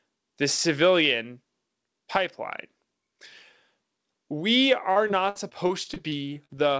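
From 4.92 s to 6.51 s the speech turns choppy and robotic, with short pieces dropping out. This is repeated packet loss: around a dozen holes opened in quick succession, the longest about 58 ms, and each was papered over by stretching the sound just before it, so roughly a fifth of that stretch is synthetic filler. The G.722 call band, with nothing above 8 kHz, carries through unchanged.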